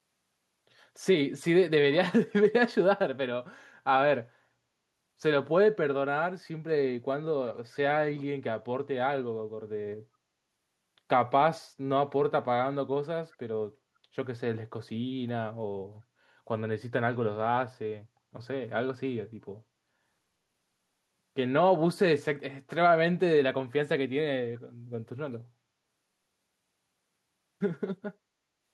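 At 24.54 to 24.59 s a brief, very faint scrap of the speech returns about 371 ms late, far below the main level. This echo leak likely comes from a far-end loudspeaker whose echo canceller let a little of its microphone pickup slip back down the line.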